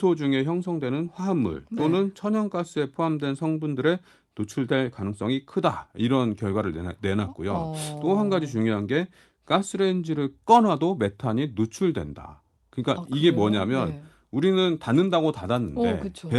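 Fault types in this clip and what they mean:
No technical faults are audible anywhere in this speech recording.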